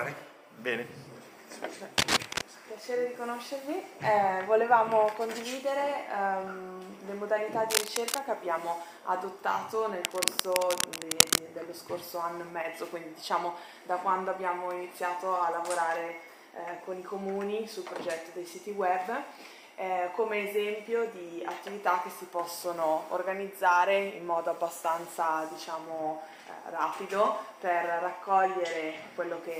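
Dense, uneven scratching and rustling breaks in at 1.98 to 2.49 s, a little louder than the sound itself, then at 7.70 to 8.19 s and 10.04 to 11.38 s at about equal level. This cable scratch noise likely comes from a worn connector whose contact resistance flickered as it moved.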